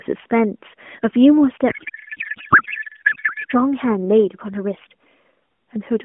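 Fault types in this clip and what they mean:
Codec payload misread: From 1.70 to 3.52 s the speech turns to garbled noise and warble. This points to octet-aligned AMR frames read as bandwidth-efficient.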